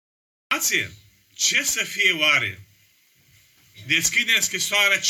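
From 0.0 to 0.51 s there is only digital silence. Then the sound appears abruptly, already in progress. This is a cut-off start: capture began late, mid-sound. There is no natural attack or fade-in, just a hard jump from nothing into full signal.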